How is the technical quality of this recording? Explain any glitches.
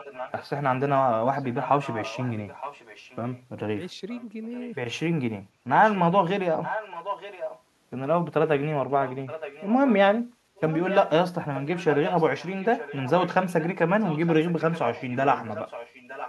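The recording's held back by a recurring echo leak. A delayed copy of the speech, trailing about 0.92 s behind, shows up at 0 to 0.5 s, 1.42 to 3.42 s, 4.1 to 4.73 s, 5.68 to 5.99 s, 6.62 to 7.62 s, 9.05 to 9.94 s and 10.56 s to the end. It sits roughly 10 to 25 dB below the main speech, loudest around 6.6 s. It's likely a loudspeaker on the far end feeding its mic, with the echo canceller missing part of it.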